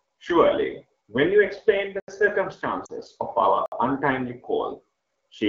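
A speech recording, carried by AMR wideband coding, breaks up in three places. At 2.00 s the sound cuts to digital silence for 80 ms, and again at 3.66 s for 60 ms. Each block of digital silence starts and stops with no fade. The output buffer was most likely not filled in time. At 2.85 s a 40 ms stretch, which fits two lost AMR speech frames, drops to near silence. The decoder repeated the last good settings with falling gain.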